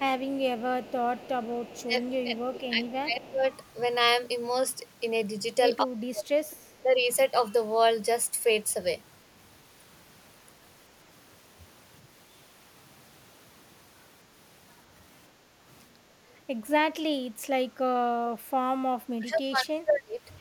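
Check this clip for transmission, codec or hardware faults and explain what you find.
Two faults recur in the speech: echo leaking back through the line and the talker being pushed down whenever both ends speak at once.

Echo leak appears from 0.18 to 2.4 s, briefly at 2.87 and 3.24 s, and again from 6.51 to 6.83 s. The likely cause is a far end on a loudspeaker whose echo canceller let part of the returned signal through. A faint copy of the speech trails it by 220 ms, around 25 to 35 dB below the direct sound, in short scraps and one longer stretch.

Speech suppressed in double talk occurs from 1.85 to 3.46 s, 5.84 to 6.44 s, 6.83 to 7.09 s and 19.1 to 20.21 s. With both sides talking, the canceller likely could not tell the talker from the loudspeaker echo and attenuated everything. The speech dips, by up to around 30 dB at its deepest, sometimes close to cutting out, for roughly one and a half seconds in the first stretch and about a second in the last.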